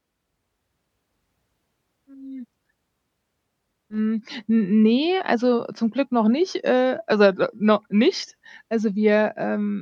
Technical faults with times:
none

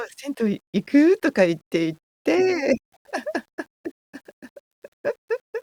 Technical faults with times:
0.00-5.63 low bit depth without dither

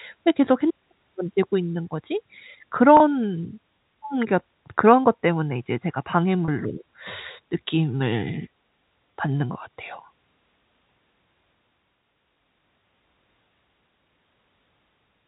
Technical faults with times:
2.97-3.00 packet loss with pitch repetition
6.45-6.48 packet loss with pitch repetition

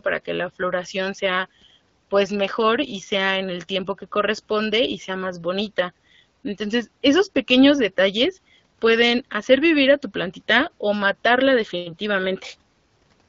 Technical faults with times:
none

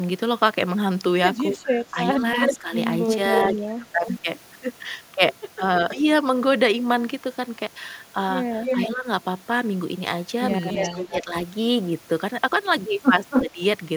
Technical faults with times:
1.63-4.07 speech suppressed in double talk
2.42-4.14 echo leak
8.64-8.88 echo leak
8.94-9.07 speech suppressed in double talk
10.69-11.15 echo leak
10.81-11.35 speech suppressed in double talk
13.30-13.49 echo leak
13.48-13.60 speech suppressed in double talk

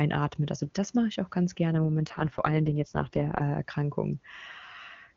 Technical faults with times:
1.72-3.42 AMR rate drop

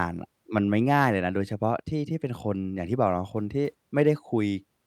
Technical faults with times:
none

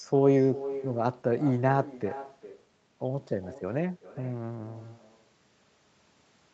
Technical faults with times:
0.00-6.54 echo with no canceller

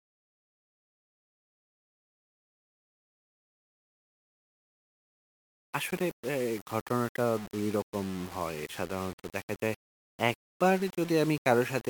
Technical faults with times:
0.00-11.90 low bit depth without dither

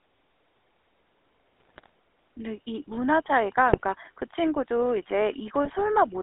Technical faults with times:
0.00-6.23 GSM full-rate codec
1.61-1.89 GSM bit errors
3.72-3.81 GSM bit errors
5.65-5.76 GSM bit errors

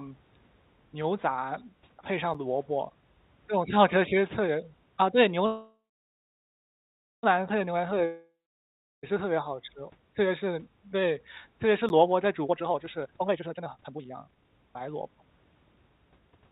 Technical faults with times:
2.34 block of digital silence
5.46-7.25 call audio freeze
8.05-9.05 long network dropout
11.89 block of digital silence
12.44-16.36 jitter buffer speed-up

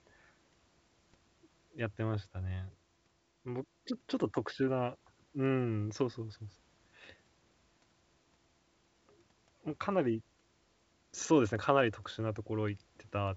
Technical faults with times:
none

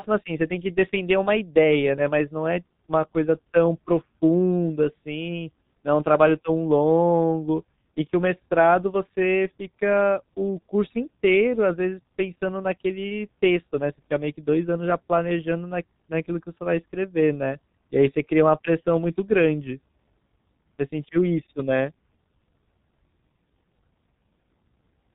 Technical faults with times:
0.00-25.15 G.723.1 codec

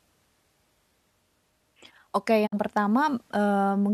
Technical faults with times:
2.45-2.54 digital broadcast dropout

